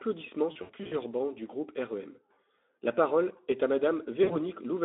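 From 0.51 to 0.96 s, just before "bancs du groupe", and again from 4.23 to 4.37 s after "parole est à", VoIP packet loss concealed by the speech codec: the decoder extrapolated from its last pitch and filter through roughly 220 ms of scattered gaps (runs up to 80 ms), then about 60 ms, leaving a stretched, fading sound and weakened speech on the narrowband Speex line.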